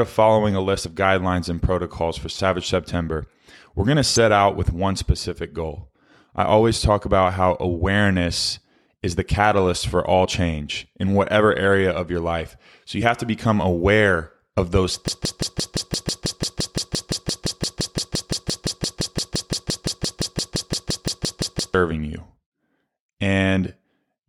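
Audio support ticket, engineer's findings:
Short chirps and blips at 0.84, 4.16, 10.24, 13.01 and 16.05 s, each brief. Damaged data in the compressed stream: the decoder misreads corrupted frames, loses sync, and jumps to the next frame header.

Broken-record loop from 15.08 to 21.74 s. A 172 ms fragment of the speech repeats back to back, 39 times, and the audio due in that span is lost. Likely cause is a stalled player, encoder or stream resending its last buffered fragment.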